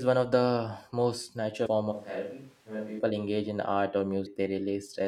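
Speech with two brief stretches of damaged data in a compressed stream, at 1.65 s and 4.25 s. At each, the decoder meets corrupted frames, loses sync and searches for the next valid header, so a short chirp, squawk, click or hole cuts in. On a spectrogram each shows as a thin vertical disturbance lasting under 20 ms, and the waveform shows a small discontinuity. From 1.93 s to 2.98 s the sound turns abruptly roomy and hollow, with thinner low end, a level drop of about 5 dB, and room noise rising to roughly 25 dB below the speech. This is likely a switch to a distant microphone after the close mic's signal dropped out. The spectrogram shows reduced low-frequency energy, reverberant tails smearing each syllable and a raised noise floor between sounds, with hard edges at both switches. The waveform shows a lower, less peaky envelope across that second.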